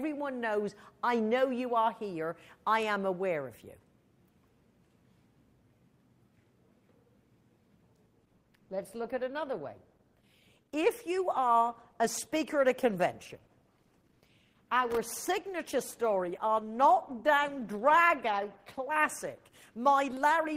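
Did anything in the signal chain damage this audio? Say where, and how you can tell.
Yes. At 8.06 s the audio switches abruptly to lower quality and stays that way to the end, with no gap at the transition. There are more codec artefacts than in the first eight seconds. This is an adaptive stream at a lower bitrate, a network-stage fault. The player switched to a cheaper encoding when throughput fell, which fits a move from roughly 64 kbit/s Opus to 16 kbit/s.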